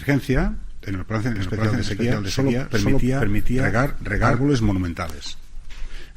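From 1.36 s to 4.70 s the sound is doubled: a second full-band copy trails the original by about half a second, at roughly the same level. This doubled audio track likely comes from the signal being captured twice through paths of different latency, or from two out-of-step copies in an edit. Unlike an echo or reverb, the copy repeats only once, with no decay or room colour, and it cuts in and out abruptly.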